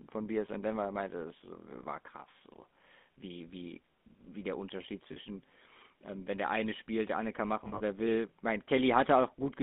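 The speech here has a buzzy, gravelly roughness throughout, confined to a narrow line band from about 200 Hz to 3.6 kHz. This is the signature of the GSM full-rate codec. It rebuilds the voice from a vocal-tract model driven by a sparse, regularly spaced pulse excitation, and that coarse excitation is what turns the voice gritty. The damage is plainly audible, and the band and texture fit the 13 kbps full-rate scheme.

Two brief dropouts come across as a held, metallic ring instead of a gap, which points to lost GSM frames. From 5.12 to 5.18 s, about 40 ms is bridged, consistent with two frames. The decoder repeats the last good frame's settings. From 7.64 to 7.82 s, about 120 ms of loss is scattered over 160 ms, with the longest run around 70 ms. That stretch rings in short bursts.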